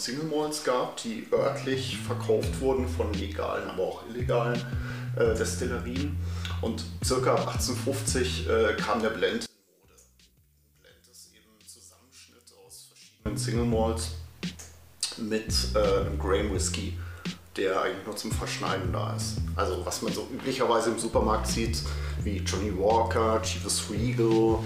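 From 9.46 to 13.26 s the sound drops away sharply, falling by about 25 dB, and what's left comes across faint, with the centre nearly gone. That's most likely one channel inverted: one side of the stereo pair had its polarity flipped, so when the two are summed to mono, everything they share cancels out. Only the difference between the channels survives, which explains the faint, weak residue through that stretch.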